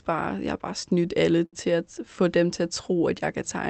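A short stall from a late packet at 1.45–1.56 s, right after "har bare snydt alle" and before "at få dem til", interrupts this speech recording. The jitter buffer ran dry, so the receiver stretched the last sound for about 73 ms, producing a hold with a slight buzz or dip. Nothing is lost, and the stream resumes where it stopped. The call path's Opus coding limits the audio to about 8 kHz.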